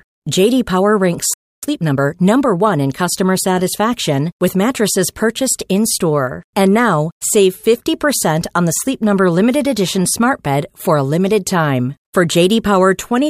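A playback stall runs from 1.34 to 1.63 s: the speech drops to silence for about 0.29 s mid-flow, likely because the player ran short of data. Time-compressed catch-up follows from 1.63 to 2.79 s, over "in customer satisfaction with": small pieces are cut and cross-faded, so the speech is hurried at 1.25 times normal speed without a pitch shift.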